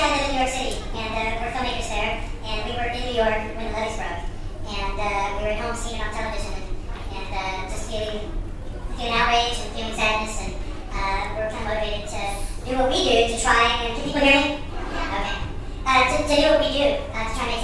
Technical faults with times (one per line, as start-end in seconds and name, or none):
0.00-17.64 wrong sample rate